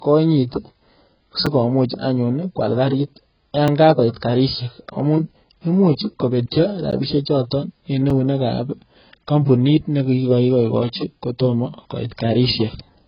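Speech runs throughout with a dull, smeared band-limited sound: nothing reaches above 5.1 kHz, and sibilants and held vowels take on a watery, warbling texture. The cause is likely heavy AAC compression, with AAC-LC at a very low bitrate around 12 kbps. A plain low-pass filter would leave the remaining band clean. Here the damage sits inside the passband as swirling, unstable detail, which points to a codec discarding and approximating spectral lines frame by frame. On top of that are four blocks of digital silence, at 1.46 s (5 ms), 3.68 s (1.5 ms), 6.91 s (13.7 ms) and 8.1 s (5 ms). Each is an abrupt drop to silence and back with no fade, heard as a tick or, for the longest, a brief dip. That separates them from isolated clicks, which add energy rather than removing a stretch of signal, and from codec artefacts, which do not cut the signal out abruptly.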